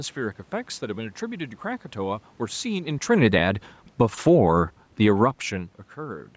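Automatic gain falling affects this speech clip: the call's gain control treated the input as too loud or its background noise as too strong and pulled its gain down, by about 7 dB from 3.08 to 4.29 s and about 3 dB from 4.87 to 5.26 s, so the voice and the room noise behind it sink together.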